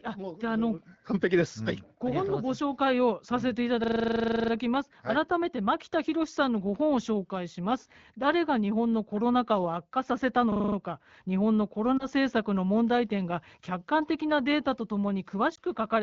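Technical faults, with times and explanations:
3.84–4.52 s and 10.52–10.76 s, system hang loop: a driver freeze left the hardware replaying one 40 ms buffer, 17 then 6 times, giving a rapid 25 Hz buzzing stutter.
11.97–12.06 s and 15.55–15.60 s, lost AMR speech frames: a single 20 ms frame failed each time, so the decoder filled in from the previous frame, causing a brief dip or warble.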